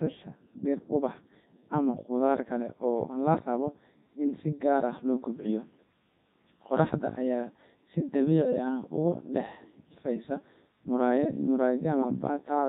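From start to finish the speech has gone through a Codec 2 vocoder, and the damage is heavy. The decoder rebuilds the voice from sine waves using pitch, voicing and a rough spectral envelope, so everything sounds robotic and buzzy, which fits Codec 2's 3.2 kbit/s mode.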